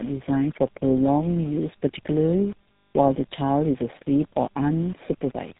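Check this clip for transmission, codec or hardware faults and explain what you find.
There's one fault, running the whole way through: tandem speech coding. The call seems to have crossed two low-rate speech codecs in a row, which fits a G.729A link handing over to GSM full rate, the GSM coder re-coding the G.729A's already damaged output. Nothing comes through above about 3.8 kHz, so it sounds muffled, rough and warbly.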